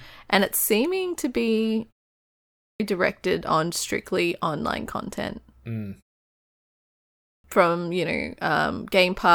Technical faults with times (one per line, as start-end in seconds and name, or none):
2.24-2.80 clipped start after a pause
6.85-7.44 clipped start after a pause